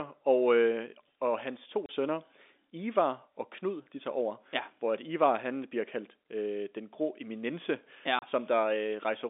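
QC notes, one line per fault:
1.86 s and 8.19 s, packet loss filled with silence: after "øh og hans to" and again after "den grå eminence ja", the speech drops out for 30 ms with hard edges, because a lost packet was replaced by silence, which fits a 30 ms packet length.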